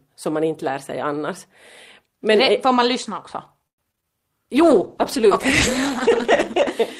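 Repeated packet loss (robotic sound) runs from 3.67 to 4.06 s. Four gaps open in quick succession, the longest about 108 ms, and each is patched by stretching the preceding sound. Roughly two-fifths of the stretch is filled this way, so the speech turns choppy with fragments missing.

A call bitrate drop follows from 4.55 to 6.77 s. The sound coarsens and loses its upper frequencies, which fits the encoder being pushed from about 32 down to 11 kbps as bandwidth fell. It stays at that lowest quality for about 2.2 s, sounding rough, watery or muffled.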